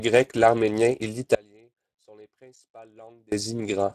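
Throughout, the speech carries plainly audible Speex codec damage. The CELP coder has too few bits to model the excitation, so the speech sounds hoarse and noisy. Nothing is present above 15.5 kHz, which fits a bitrate of about 22 kbps.

Just after "l'arménien et", at 1.35 s, the signal cuts out abruptly and does not return until 3.32 s. This audio dropout to a faint residue lasts 1.97 s and leaves only a faint trace about 30 dB below normal level. The likely cause is a break upstream while the path after it stayed live.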